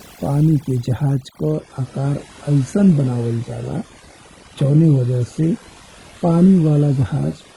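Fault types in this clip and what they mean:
Overdone noise removal: A noise reduction stage was set far too aggressively, pulling down any frequency band near its noise estimate. Throughout the clip, quieter parts of the speech vanish with the noise, leaving speech over a near-silent background with twinkling specks.
Adaptive stream at a lower bitrate: The stream dropped to a much leaner encoding when the connection slowed. From 1.52 s, right after "पानी के जहाज", to the end, quality falls abruptly without a gap, nothing remains above 11.4 kHz, and treble turns synthetic, which fits a low-bitrate HE-AAC stream.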